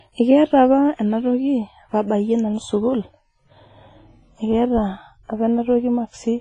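From the start of the speech the audio carries heavy transform-codec damage: a washy, ringing texture with hiss that swells and recedes with the signal, and nothing at all above 10.6 kHz. This is likely WMA compression at a low bitrate, which fits roughly 24 kbps. Long transform blocks smear quantisation noise over tens of milliseconds, and the encoder has zeroed weak spectral lines and cut off the top end entirely.

At 4.46 s the sound turns abruptly duller and stays muffled through to the end at 6.41 s. This is de-emphasis applied wrongly: a treble-cut stage meant to reverse pre-emphasis has acted on audio that had none, or has been applied twice. The result is a smooth downward tilt toward high frequencies, reaching about 10 dB down at 10 kHz relative to 1 kHz. This strips presence and consonant detail on top of the codec's existing band limit.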